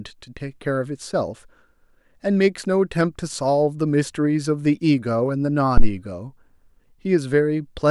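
A speech recording with a phantom power thump from 5.78 to 5.92 s: a deep, low-frequency knock peaking at about -3 dBFS that dies away within roughly 32 ms. It comes from a supply being switched on a live input, its DC step passing through the coupling capacitors.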